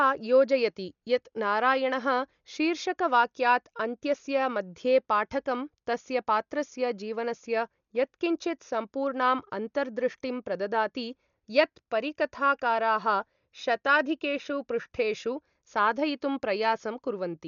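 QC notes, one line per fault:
Throughout: Dolby Digital compression, likely the cause of this heavily damaged speech, which fits a bitrate around 48 kbps. Nothing survives above 6.9 kHz, so the sound is dull, and starved frequency lines filled with dither noise leave a rough, fluttering haze around tonal parts.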